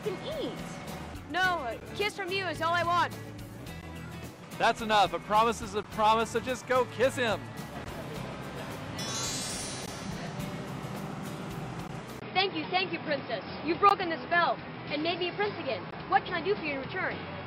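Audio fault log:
1.80, 3.81, 5.83, 7.84, 9.86, 11.88, 13.89 and 15.91 s: gap at a join of encoded pieces. Separately encoded pieces were joined without trimming codec delay and padding, so the sound drops out for 11 to 16 ms every 2 s, then resumes.
12.20 s to end: input switched to a poorer device. Recording likely moved to a narrower-band input. After a 20 ms silence, everything above 5.4 kHz disappears and a faint new noise floor appears. The level stays about the same.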